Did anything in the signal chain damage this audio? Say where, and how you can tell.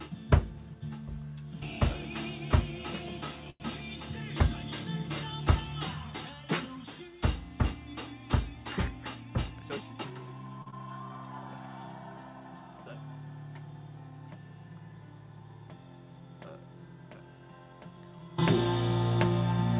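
Yes. At 3.5 to 3.62 s and 10.62 to 10.68 s the sound hangs with a slight buzz or dip: short stalls from late packets, where the jitter buffer ran dry and stretched audio for 99 ms and 40 ms.

From 9.05 to 10.27 s the audio runs hurried at unchanged pitch, about 109% speed. This is a jitter buffer speed-up, trimming roughly a tenth of a second of pitch periods.

At 10.70 to 10.74 s there is a brief smear. This is short concealed packet loss in the network stage: 20 ms never arrived and was synthesised from the preceding sound.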